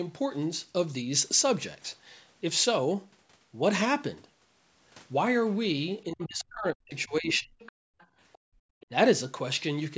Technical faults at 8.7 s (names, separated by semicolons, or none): background gated by the echo canceller